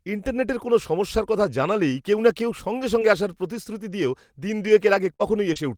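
From about 2.99 s, right after "কেউ না কেউ সঙ্গে", and running to about 5.57 s, you get scattered short gaps. Roughly three small holes, the longest around 50 ms, where packets went missing or arrived late. The receiver papered over each by stretching the preceding sound, rebuilding about 140 ms to cover 80 ms lost. Only a few percent of the stretch is affected, so the speech stays clear apart from brief ticks and little smeared hiccups.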